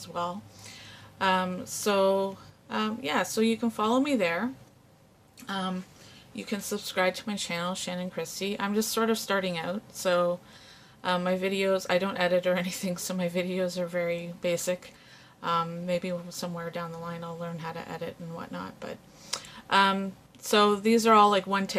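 Weak DAB reception let bit errors slip past error correction into the MP2 data, corrupting samples. The result is DAB burbling from 7.14 to 7.33 s and again briefly at 9.06 s, as short blips of noise appear in single sub-bands.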